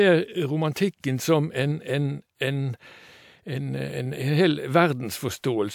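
Nothing technical goes wrong anywhere in this bit of speech, so there's really nothing to flag.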